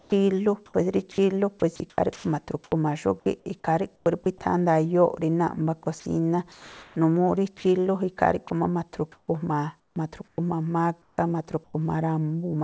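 Speech that keeps dropping out into a hiss, in four choppy stretches: 0 to 2.72 s, 3.96 to 4.26 s, 5.84 to 7.64 s and 8.48 to 11.74 s. In each, word edges and quiet bits vanish and flat synthetic background fills the gaps, about 0.56 s, 0.12 s, 0.58 s and 0.7 s respectively. That's most likely sound chopped by the voice detector, with the sender toggling transmission and comfort noise patching the holes. The call path underneath tops out at 8 kHz, which fits wideband G.722 at 64 kbps.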